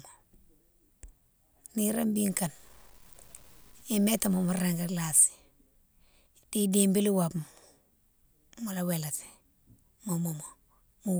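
From 2.29 to 5.17 s the speech turns gritty, with grainy distortion that tracks the voice and sputters on quiet tails. That's low bit depth without dither, likely a truncation to about 8 bits, leaving the error roughly 30 dB under the signal.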